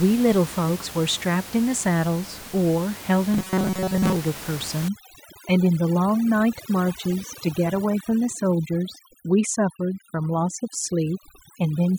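From 3.34 to 4.17 s the speech turns into a rigid, metallic buzz fixed at 188 Hz that only loosely tracks the words. This is likely robotic sound from repeated short buffers: the audio arrived too seldom, so a chunk of about 5 ms was looped in place of most of the missing sound.

From 4.88 s to the end, the background, which sat about 14 dB below the speech, drops and breaks up into twinkling specks. This is overdone noise removal: the reduction was set so strong that it cut individual frequency bands close to the noise level, taking the quieter parts of the voice with them.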